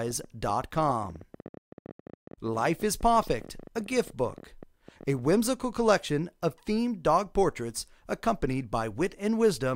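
From about 0.08 s to 5.28 s there's a train of clicks, roughly 70 of them at about 15 per second, spaced unevenly rather than on a steady beat. Each click has much the same shape and reaches roughly the level of the sound itself, so you hear a busy ticking or popping laid over everything. The likely culprit is something injecting pulses from outside, such as interference from nearby gear, a dodgy connection or a power supply.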